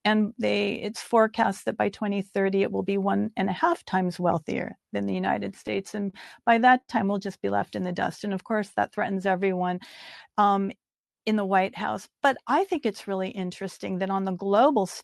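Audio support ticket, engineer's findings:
Repeated stalls (stutter), 5.67–6.90 s. Seven short hangs, longest 71 ms, about 150 ms in total, roughly an eighth of that stretch. Jitter buffer ran dry as packets arrived late; receiver stretched the last sound to cover each gap. Nothing lost, but playback drags.

Call path: band-limited top end consistent with Opus at around 32 kbps, audio stopping near 12 kHz.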